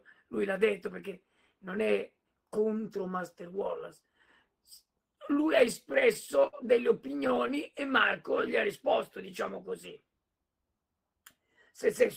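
From 5.59 to 6.56 s, and again from 7.01 to 7.52 s, the sound drags and hiccups in repeated stalls (stutter). Late packets kept emptying the jitter buffer, and the receiver stretched the last sound to fill each gap, for pauses up to 59 ms.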